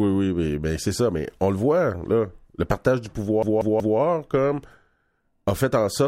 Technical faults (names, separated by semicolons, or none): CD stuck on one turn